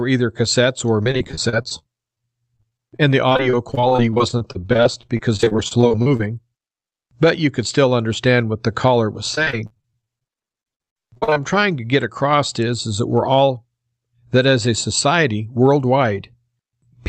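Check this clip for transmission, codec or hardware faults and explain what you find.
Two stretches of repeated packet loss (robotic sound) break up this speech. The first runs from 1.03 to 6.21 s, just after "either cassettes or", and the second from 9.35 to 11.41 s, between "what the caller was" and "trying to get across". In each, dozens of brief gaps (up to 34 ms, then 60 ms) are filled by stretching the previous sound, concealing about 21% and 36% of each stretch. The result is choppy speech with pieces missing rather than the single clean hole of an isolated dropout.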